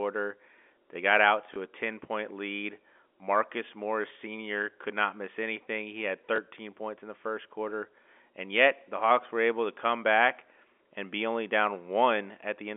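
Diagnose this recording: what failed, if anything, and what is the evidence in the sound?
Network trouble: packet loss with last packet repeated. At 1.54–1.56 s and 6.36–6.38 s a small blip sounds where a repeated 20 ms chunk, which fits one lost packet, fills the gap.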